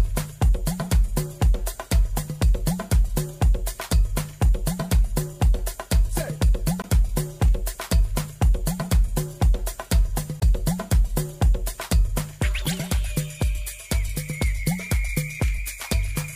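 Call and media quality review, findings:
Damaged data in compressed stream: short glitches at 6.82–6.85 s, 10.40–10.43 s, 12.65–12.68 s. Decoder misreads corrupted frames and loses sync before recovering.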